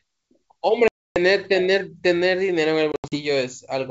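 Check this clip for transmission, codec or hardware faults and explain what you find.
Two dropouts point to packet loss on an ADPCM call. The first runs from 0.88 to 1.17 s, a single 280 ms hole with hard edges, roughly fifteen packets' worth. The second spans 2.92 to 3.18 s, with 140 ms missing in scattered gaps over 200 ms and the longest run 80 ms. Lost packets become silence. The decoder's predictor and step size then drift from the sender's, so the speech returns slightly and briefly distorted before settling. The wideband G.722 coding itself sounds clean.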